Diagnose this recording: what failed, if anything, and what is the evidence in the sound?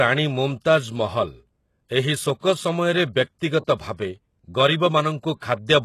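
Codec stage: sibilants sound gritty and metallic, and the spectrogram cuts off at 12.3 kHz, likely HE-AAC compression near 16 kbps synthesising treble by replication.

Pre-echo, also the codec: hiss precedes attacks at 2.39, 3.65, 3.75 and 5.36 s, a 28 to 56 ms smear before each transient in the waveform.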